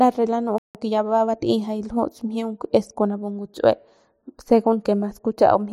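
At 0.58 s the speech cuts to silence for about 165 ms, a playback stall, most likely the player running dry or its thread getting blocked. From 0.75 to 1.41 s comes time-compressed catch-up: the player trims its backlog by splicing out small chunks, so speech runs about 1.25 times fast at normal pitch.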